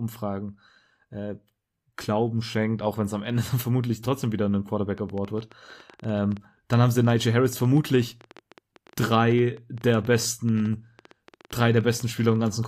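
Right after "vermutlich trotzdem wieder ein", at 4.98 s, a train of clicks starts and keeps going until 12.65 s. It's around seventy sharp, same-shaped pops, about 10.6 per second but unevenly spaced, so it sounds like a stuttering tick rather than a steady one. They peak at roughly the level of the speech, so they cut straight through it and the pauses. The likely cause is interference from nearby gear or a faulty connection or power supply.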